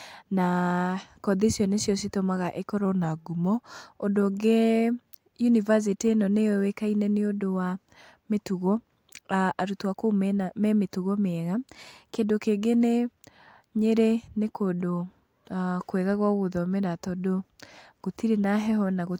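From 2.85 to 3.63 s the speech slows by 5.8% and drops about a semitone (104 cents), then snaps back. After "mena me mĩtugo mĩega", from 11.55 to 12.24 s, it speeds up 5.8% and rises about a semitone (98 cents). Both are likely a drift correction step, where clock-matching software briefly changed playback rate to rebalance its buffer. A spectrogram shows the voice harmonics stepping down, then up, with abrupt edges; the waveform shows stretched, then compressed syllables.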